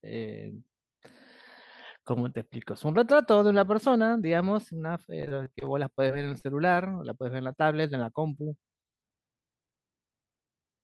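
Repeated packet loss (robotic sound) runs through this speech from 5.21 to 6.78 s. Over a dozen short gaps, none longer than 22 ms, are patched by extending the preceding sound. About 14% of that stretch is concealed, leaving choppy speech with pieces missing. The call path's top end stops near 12 kHz, which fits Opus at a moderate bitrate.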